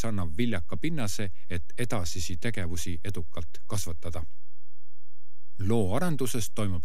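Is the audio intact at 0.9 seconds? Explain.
No. A DC offset of about -21 dBFS runs through the whole speech clip, including 0.9 s. The waveform sits shifted off zero, wasting headroom and adding steady energy at the lowest frequencies.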